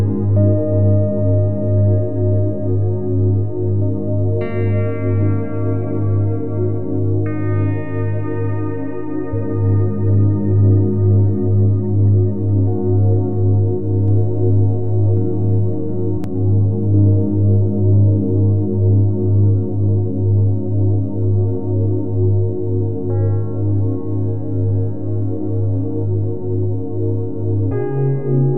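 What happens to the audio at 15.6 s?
A doubled audio track runs from 14.08 to 16.24 s: a full-band copy trails about 0.7 s behind, roughly 5 dB quieter, likely from a slower second capture path. On the waveform and spectrogram it appears as a fainter duplicate of each event, with no smearing, beginning and ending abruptly.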